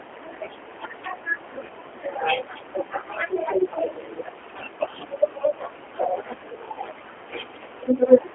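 Throughout, the speech is rebuilt by a G.729 codec, consistent with 8 kbit/s coding, keeping only 250 Hz to 3.4 kHz and leaving a plainly rough, synthetic texture.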